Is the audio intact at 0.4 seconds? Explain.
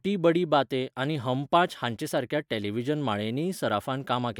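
Yes, the speech at 0.4 seconds is intact, with no dropout, click, distortion or other fault audible at that moment.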